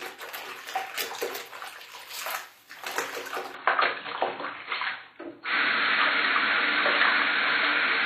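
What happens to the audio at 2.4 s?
At 2.4 s the audio carries the same HE-AAC compression damage heard across the whole clip, plainly audible and likely the cause of its gritty top end. The upper band is present but synthetic: it is rebuilt by copying lower bands upward and reshaping them, so high detail sounds metallic and misaligned, with nothing above 15.5 kHz. That bright but false treble is what separates it from an ordinary low-pass cut, and it points to a bitrate around 24 kbps.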